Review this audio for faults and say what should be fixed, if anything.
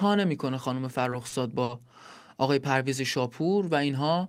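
Two short stalls from a late packet occur, at 1.29 to 1.34 s and 1.64 to 1.71 s. Each time a packet arrived late, the jitter buffer ran dry and the receiver held the last sound, for 30 ms and then 50 ms, before resuming with nothing lost. On a spectrogram this looks like horizontally smeared, frozen bands; the waveform shows a briefly repeating cycle. Enlarging the jitter buffer's target depth or making it adapt faster would prevent this.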